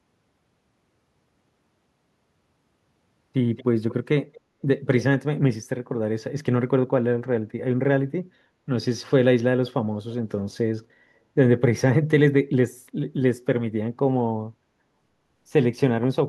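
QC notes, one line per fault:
3.57–3.64 s, 3.89–3.94 s, 4.33–4.41 s and 4.85–5.03 s, echo leak: a faint, delayed copy of the speech surfaces in four short scraps, trailing the original by 224 ms. It sits well below the main speech, roughly 15 to 30 dB down, loudest in the last burst. The likely cause is a far end playing the call on a loudspeaker, where the echo canceller let some of the microphone pickup slip through and return.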